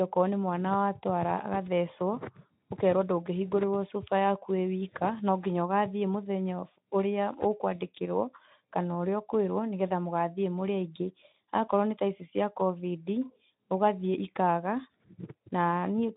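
No faults to report: the speech sits on a Speex path with nothing above about 3.9 kHz and only light coding coarseness, which fits a setting around 15 kbps.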